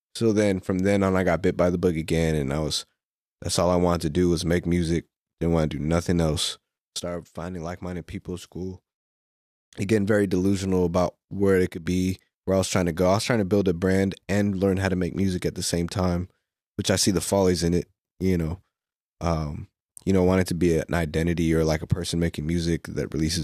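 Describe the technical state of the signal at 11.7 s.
At 11.69–11.86 s, right after "delusional about where it", a sudden gain jump drops speech and background noise together by about 10 dB, likely from an unramped gain step; the waveform shows an abrupt envelope step.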